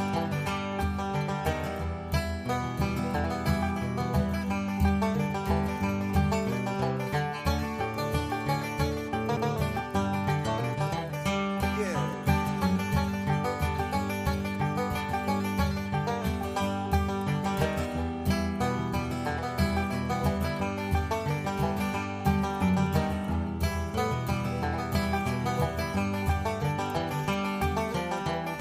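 At 9.37 s, a CD skip. The laser jumped to another turn of the spiral. A tick and a few milliseconds of mute precede a sudden jump in the sound.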